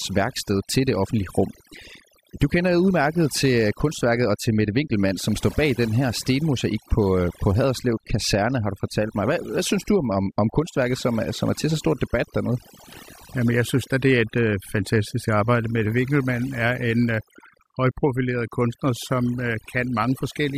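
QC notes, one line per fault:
Throughout: overdone noise removal. The noise reduction on this speech recording was pushed too hard. Any frequency band that came near its noise estimate was pulled far down or switched off, and the quieter parts of the voice went with the noise. The pauses drop to near silence scattered with twinkling specks. On a spectrogram the background shows as an almost empty floor dotted with isolated bright flecks, and the speech harmonics look ragged and patchy at their weaker edges.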